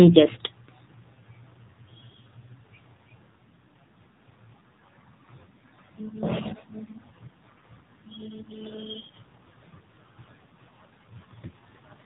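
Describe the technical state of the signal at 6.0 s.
At 6.0 s the speech carries AMR narrowband mobile codec damage, present across the whole clip. Nothing above 4 kHz survives, and the vocal-tract model driven by sparse pulses per 5 ms leaves a plainly buzzy, synthetic quality, which fits a low rate near 7.4 kbps.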